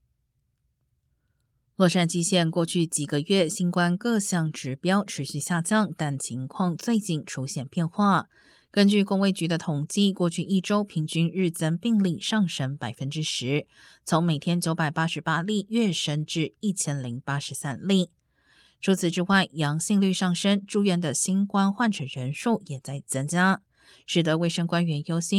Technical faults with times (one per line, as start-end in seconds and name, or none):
none